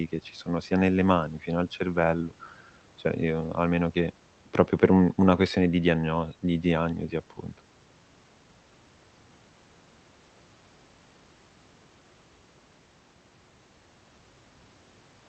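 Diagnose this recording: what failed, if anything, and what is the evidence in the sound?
Nothing failed here: the speech arrives through the call path as expected, its top end rolled off at around 8 kHz as the codec's bandwidth setting would give, and the background noise of the room sits about 41 dB below the speech, which belongs to the recording space rather than to the system.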